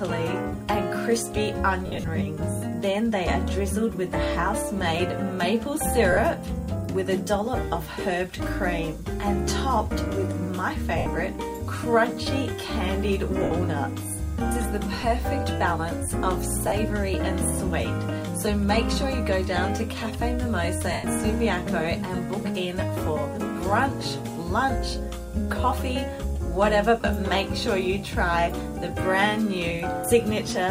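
Lost LE Audio frames cause brief noisy smears at 1.86–2.08 s (scattered gaps, longest run about 70 ms), 6.12, 10.98, 13.43, 15.01, 16.68, 20.92 and 27.01 s, lasting 20 to 160 ms. The decoder repeats the last spectrum with random signs, which fits 10 ms frames. On a spectrogram, tonal lines blur into broadband haze, and the waveform shows matching short, fuzzy patches. The light lossy compression on the clip sits underneath these dropouts.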